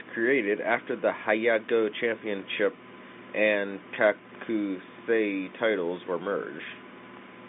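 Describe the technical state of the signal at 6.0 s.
At 6.0 s the signal is intact, with no fault present, only the narrow telephone band of the G.711 line coding, which passes roughly 200 Hz to 3.7 kHz.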